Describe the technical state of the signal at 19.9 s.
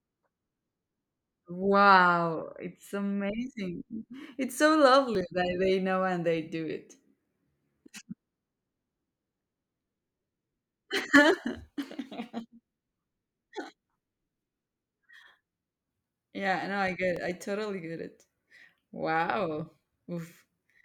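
At 19.9 s the signal is intact, with no audible fault at that moment.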